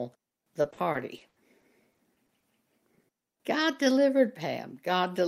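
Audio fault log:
0.61–2.45 s, repeated packet loss (robotic sound): through this stretch the speech keeps dropping out in short bursts, around a dozen holes, none longer than about 80 ms. Most are papered over by stretching the last bit of sound, about 320 ms of filler in all, which gives that robot-like quality. Roughly 220 ms simply goes missing, so it also sounds choppy, with little bits cut out.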